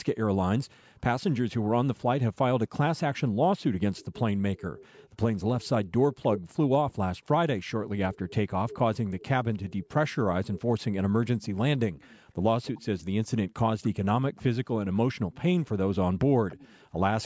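At 1.58 to 1.71 s the room tone plunges by about 40 dB, then recovers: background gated by the echo canceller, which ducks the microphone while the loudspeaker plays. From 3.96 to 6.93 s a faint copy of the speech trails about 308 ms behind, at about 25 dB below it. This is an echo leak, likely a loudspeaker echo the far-end canceller failed to remove, and it is distinct from reverberation because it is a discrete, delayed repeat. Within it, 4.63 to 4.76 s dips about 10 dB, and just after it, 7.22 to 7.26 s briefly dips about 17 dB. The echo returns at a 290 ms delay from 8.13 to 15.36 s (about 20 dB down) and from 16.49 s to the end (about 25 dB down).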